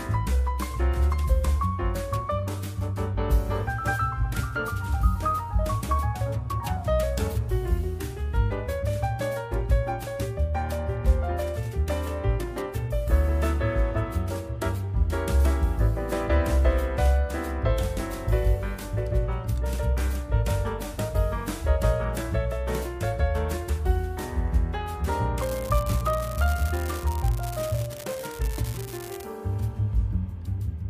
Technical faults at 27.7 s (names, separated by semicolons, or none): unreliable data bit